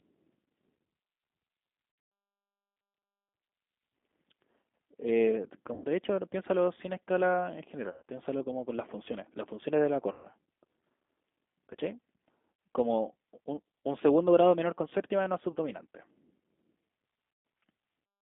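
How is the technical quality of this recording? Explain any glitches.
The technical quality is poor: the whole clip carries audible low-bitrate codec damage, and the speech breaks up seven times.

G.729 codec, throughout: the speech sounds rough, slightly synthetic and boxed-in, squeezed into a line band of roughly 250 Hz to 3.5 kHz. At 8 kbit/s, each 10 ms frame is rebuilt from a vocal tract filter, a pitch predictor and a few pulses, so fine detail and everything above that band are lost.

VoIP packet loss concealed by the speech codec: at 1.92 to 2.12 s, about 180 ms goes missing in patches, the longest run being 120 ms. Shorter dropouts follow at 5.74 s (80 ms), 7.90 s (120 ms), 10.12 s (120 ms), 12.55 s (40 ms), 15.52 s (40 ms) and 17.33 s (120 ms). Each gap turns into a smeared, buzzy, fading tone as the decoder stretches its last pitch and filter to cover it. The speech stays weak for a moment after each gap because every frame builds on the previous one.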